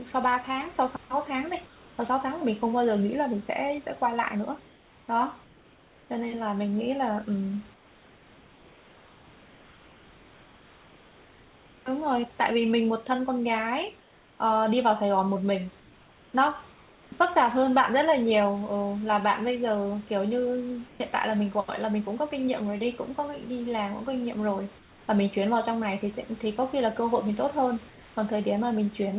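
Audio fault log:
1.66–1.98, 4.66–6.1, 7.74–11.86, 14.0–14.4, 15.8–17.12, 20.88–21.0 and 24.78–25.08 s: comfort noise in place of the background. In each pause the room's textured hiss turns flat and featureless, mostly about 3 dB quieter. The likely cause is discontinuous transmission, with the receiver filling the gaps with synthetic noise.
17.1 s: onset clipped by the voice detector. Sound re-enters abruptly after a pause, missing its soft beginning, because the detector likely reacted about 20 ms late and comfort noise covered the start.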